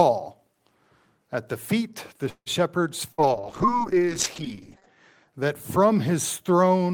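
At 2.29 s the sound stalls until 2.49 s in a call audio freeze, likely from packets held up in transit so the jitter buffer emptied. A fading buzz or hiss fills the gap, ending in about 60 ms of silence. The waveform shows a decaying tail then a flat line, and nothing is lost, just 167 ms of added delay.

From 3.12 to 3.21 s a burst of packet loss cuts the sound. About 57 ms of faded continuation stands in for it, then playback jumps ahead, skipping 60 ms. On a spectrogram this shows as a smeared, dimming stripe before an abrupt resumption.

Overlapping this, a call bitrate drop starts at 3.17 s and lasts to 5.34 s. The encoder falls from 32 to 8 kbps for about 1.7 s, so the audio turns rough and muffled. The spectrogram's upper content vanishes, band-limited at 8 kHz instead of 20 kHz.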